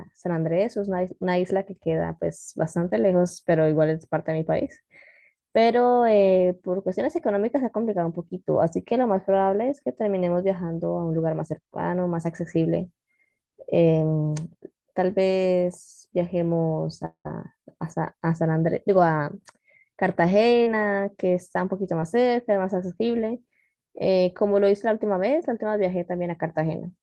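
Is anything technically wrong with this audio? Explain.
Yes, the speech has two kinds of fault, both from audio lost on its way to the receiver.

Short concealed packet loss occurs at 2.89–2.93 s, 20.63–20.68 s and 22.00–22.04 s. About 20 ms, 40 ms and 20 ms of audio went missing, and the decoder bridged each hole by extending the preceding sound before blending back in. Each is heard as a brief smear or wobble. Unlike a dropout, no silence follows.

From 17.05 to 17.27 s the sound stretches into a fading buzz or hiss, then falls to about 90 ms of silence before the speech resumes with roughly 200 ms absent. The likely cause is a long network dropout. Its length and the silent tail set it apart from the short losses.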